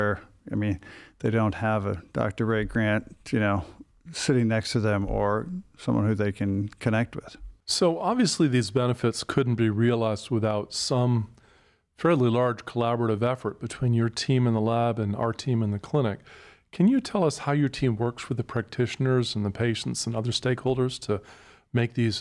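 No technical faults can be heard anywhere in the recording.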